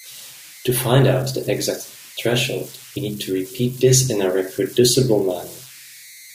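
A steady whistle somewhere around 2 kHz runs through the whole clip, most exposed in the pauses between phrases, and under the quieter stretches of speech it turns into a grainy, gritty hiss sitting about 23 dB below the signal. These are converter idle tones: a delta-sigma converter working without dither settles into repeating bit patterns whenever its input is small, and those cycles emerge as audible tones whose pitch follows the input's DC offset.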